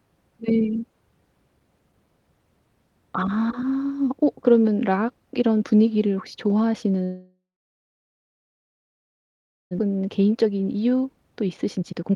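At 7.03 s the speech stops and a call audio freeze begins. The last sound carries on briefly as a fading buzz or hiss, then about 2.28 s of silence follows. It lasts until 9.73 s. Packets were likely held up, so the jitter buffer ran dry and the receiver filled 2.68 s with invented sound. Nothing is lost, but the delay grows by that much.

A skip ahead follows at 9.79 to 9.81 s. Playback jumps forward almost without a gap. Roughly one and a half seconds of speech is dropped. The two sides are joined nearly directly. This recovers most of the delay the freeze built up.

From 10.34 s to the end at 12.15 s there is a jitter buffer speed-up. The speech runs at 123% speed but keeps its pitch. It sounds hurried. The receiver cut short pitch-period pieces, around 0.4 s in total, to trim excess buffered audio.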